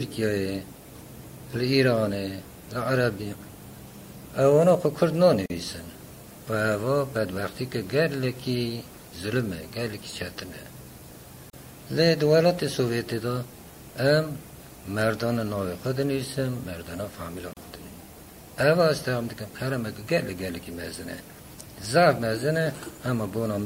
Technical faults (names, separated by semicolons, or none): gap at a join of encoded pieces